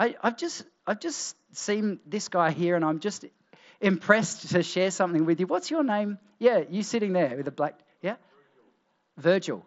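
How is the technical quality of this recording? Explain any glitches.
No glitches can be heard anywhere in the recording. The speech comes over a Bluetooth mSBC headset link, so nothing reaches above about 7.7 kHz, and the codec leaves a light grain on the louder sounds.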